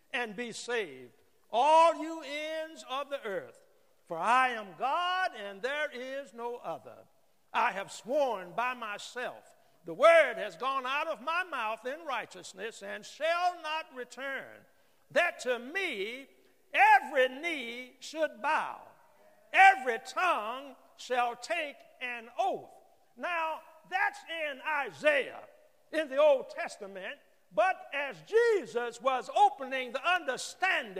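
From 0.0 to 2.0 s the audio comes from an adaptive stream starting at a low bitrate: treble is thin, codec smearing is stronger, then quality jumps abruptly with no silence, which fits a switch from about 64 to 128 kbit/s MP3, unlike a dropout or gradual filter change.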